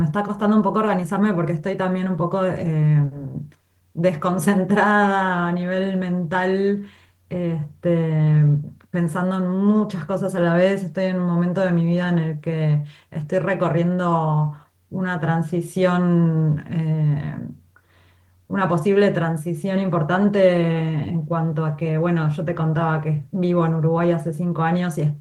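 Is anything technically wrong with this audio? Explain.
No, nothing in this audio is technically wrong.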